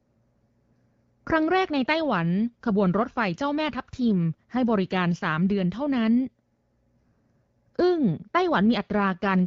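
Nothing stood out on listening to this speech, carried over the AMR wideband (HD Voice) codec at 12.65 kbit/s.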